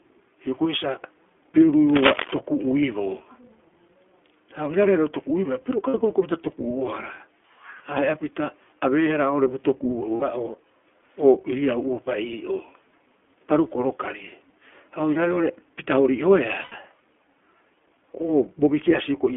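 Speech that sounds boxed-in and slightly rough and synthetic throughout, with nothing above about 3.4 kHz and little below 250 Hz. That is the iLBC codec at work: narrowband coding in 20 ms frames, at a rate that fits 15.2 kbps, with plainly audible coding damage. From 1.89 to 2.34 s a dense, uneven scratching rustle sits over the sound at about the same loudness as the speech. This is cable scratch noise, likely from a worn cable, connector or control being moved so that its contact resistance jumps around. Three times the speech briefly turns into a held, faintly buzzy vowel and then snaps back: at 5.88 to 5.95 s, right after "toku'uibaa piro", at 10.16 to 10.23 s, and at 16.62 to 16.73 s. These are lost iLBC frames, about 60, 60 and 100 ms of missing audio. The decoder fills each gap by repeating the last pitch cycle mixed with noise, and because each iLBC frame is coded independently, normal speech resumes almost at once.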